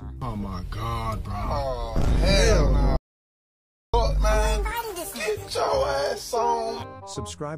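An audio dropout to silence runs from 2.97 s to 3.94 s. The sound cuts off mid-flow and returns abruptly, with about 0.97 s of silence and no room tone between. The likely cause is a briefly lost input while recording continued.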